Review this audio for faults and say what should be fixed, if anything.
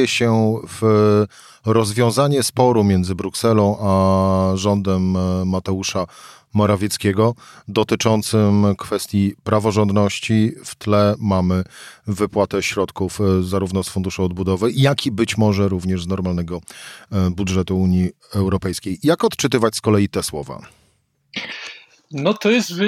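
Nothing here needs fixing; the speech comes through without any technical faults to chase down.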